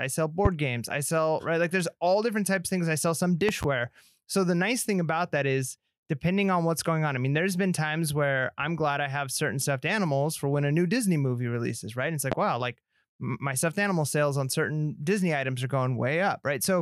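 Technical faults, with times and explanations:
0.45–0.49 s, 3.49–3.66 s and 12.32–12.35 s, loud pop: Sharp thumps about 15 dB above the speech. The first comes just before "games I sell right", the second is a quick double after "things I sell some", and the third is just before "wow like my stuffed". The speech carries on underneath each one. A brief voltage step or pulse, likely from a plug, switch or static discharge, was added to the signal, and the following circuitry shaped it into a short pop.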